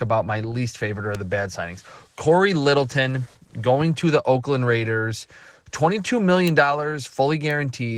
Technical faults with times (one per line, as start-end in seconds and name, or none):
0.00-7.98 Opus voice compression
1.15 bit error spike
6.47 bit error spike
7.51 bit error spike